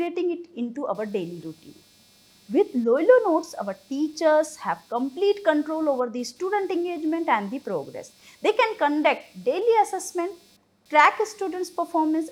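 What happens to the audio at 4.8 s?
Computer activity noise is present at 4.8 s, as it is from start to finish. The computer's shifting workload of processor, graphics and pointer activity disturbs the ground shared with the audio circuit, so a buzzy, chirping texture pulsing at around 200 times a second rides under the sound. It sits roughly 35 dB below the signal and follows the machine's activity rather than anything in the audio.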